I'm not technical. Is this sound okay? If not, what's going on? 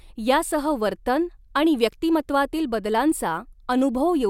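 Yes, this one's fine: nothing in it drops out, skips, crackles or gets garbled, so there's nothing here to worry about.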